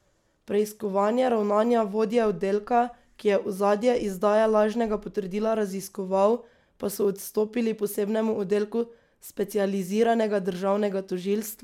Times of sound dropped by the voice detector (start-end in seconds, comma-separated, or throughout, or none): none